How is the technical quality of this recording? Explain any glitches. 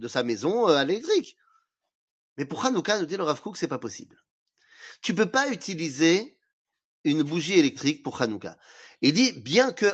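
No glitches or faults are audible.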